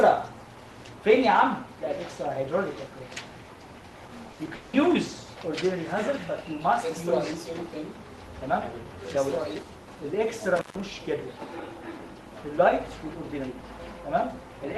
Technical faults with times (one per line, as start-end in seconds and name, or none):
4.31-4.75 repeated packet loss (robotic sound)
10.56-10.80 intermittent contact